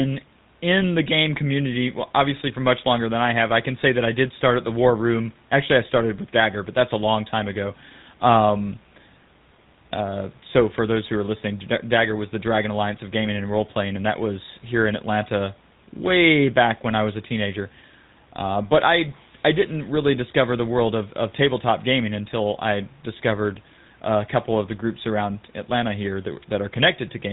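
From start to end the speech carries the plainly audible GSM full-rate codec: nothing above 4 kHz, plus a buzzy, gravelly grain from pulse-driven excitation, consistent with 13 kbps coding. That roughness, not just the narrow band, separates it from plain telephone filtering. Faint room noise sits about 38 dB below.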